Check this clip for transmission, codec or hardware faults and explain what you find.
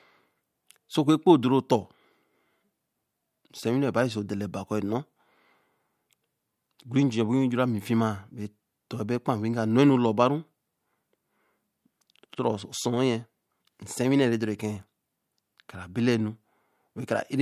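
No transmission, codec or hardware faults can be heard anywhere in this speech recording.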